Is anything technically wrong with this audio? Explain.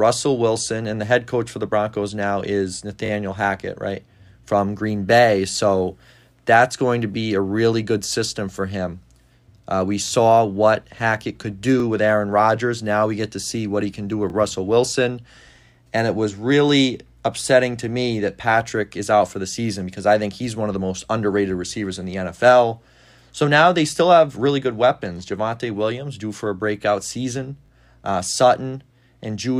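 Yes. Brief stutters in the speech at 3.06 s and 27.66 s, and single ones at 5.52, 10.08, 11.8 and 14.3 s: repeated buffer faults. Delayed audio made the device replay its last block, which fits a 20 ms buffer, with hard joins.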